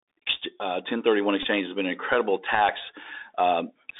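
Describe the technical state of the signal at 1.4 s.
At 1.43 to 1.46 s, just before "has been an incredible", there is a Bluetooth headset packet repeat. Packets on the headset link went missing. The decoder played the last good packet's bits again in their place. The gap lasts about 15 ms, which fits four 3.75 ms packets. Repeating at that period gives a short, flat buzz near 267 Hz. Normal sound resumes once good packets return.

Under this moment sits the Bluetooth CVSD headset codec, present across the whole clip. Its one-bit delta coding at 64 kbps (a figure the sound points to) leaves a narrow phone band of about 300 Hz to 3.7 kHz. The adaptive step cannot keep up with fast, bright sounds. Sibilants turn scratchy. A grainy hiss runs beneath the speech. The damage is plainly audible.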